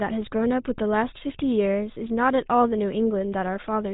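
From start to finish the speech carries GSM full-rate codec damage, plainly audible, consistent with a 13 kbps full-rate encode. The vocal-tract model is driven by pulses, with only every third excitation sample kept, giving a buzzy, gravelly roughness. A spectrogram shows nothing above 4 kHz, with coarse, smeared harmonics.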